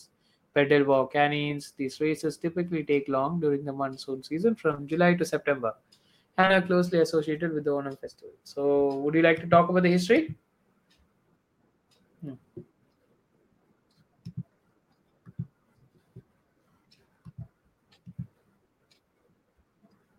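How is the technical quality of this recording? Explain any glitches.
The speech has audible glitches from short concealed packet loss, in two clusters. The first runs from 4.71 to 4.79 s, just after "during the monsoon season". The second runs from 6.41 to 6.52 s, just before "are closely associated with". Each cluster is a run of 20 ms chunks that arrived too late to decode. The receiver patched each gap by extending the preceding sound, then blended back into the real audio. You hear a brief smear or wobble, and a short consonant may drop out.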